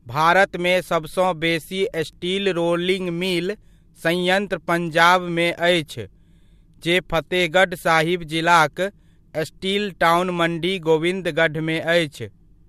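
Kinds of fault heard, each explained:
Nothing stood out on listening to this speech recording.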